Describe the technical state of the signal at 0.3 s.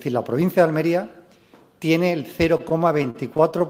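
At 0.3 s the signal is intact, with no fault audible at that point.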